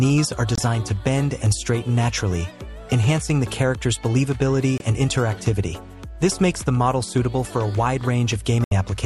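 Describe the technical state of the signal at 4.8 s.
At 4.8 s the signal has a digital broadcast dropout. The sound cuts out from 4.78 to 4.81 s, a hole of about 24 ms. That span fits a single frame that failed to decode. The receiver rejected it and muted rather than play corrupt data. Then it resumed once good frames arrived. The audio in that gap is simply gone, not delayed. It is heard as a brief, abrupt blip of silence within the sound.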